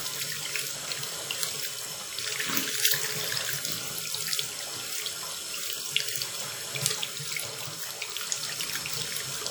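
From start to finish the sound has a ringing, washy quality, with a hiss that swells and fades along with the signal and smears transients across tens of milliseconds, though content still reaches up to about 20.1 kHz. This is likely WMA compression, where long transform blocks spread quantisation noise in time and weak components are zeroed. The plainly audible damage fits an early WMA encoder running at around 48 kbps.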